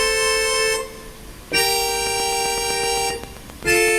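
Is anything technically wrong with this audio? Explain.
Yes. From 2.07 to 3.89 s, a train of clicks ticks steadily over the sound: about fifteen evenly spaced pops at 7.7 per second, peaking roughly 10 dB above the audio. The likely cause is nearby equipment or a faulty connection or power supply repeatedly injecting much the same short pulse.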